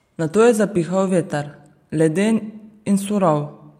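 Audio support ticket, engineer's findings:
Speech signal checked across the full clip with no technical fault found in capture, processing or playback path; no action required.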